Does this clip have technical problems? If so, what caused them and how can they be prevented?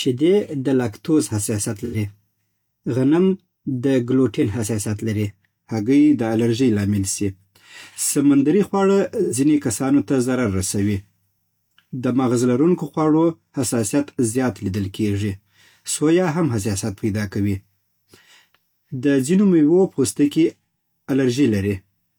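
Yes. AAC frame loss with concealment occurs at 1.84 to 1.96 s and 9.23 to 9.34 s. Each gap lasts about 85 ms, consistent with two lost frames that the decoder rebuilt from the last good spectrum. Unlike a dropout, these sound smeared and phasey, not silent. Error correction or retransmission on the stream prevents this.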